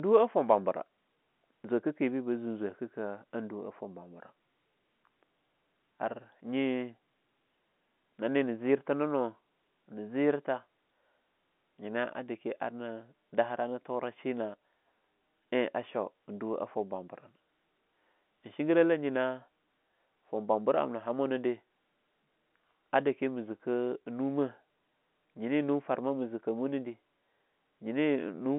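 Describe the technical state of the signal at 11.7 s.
At 11.7 s the speech is intact, with no fault at that moment, and it carries the narrow band of G.711 telephone coding, with nothing above about 3.8 kHz.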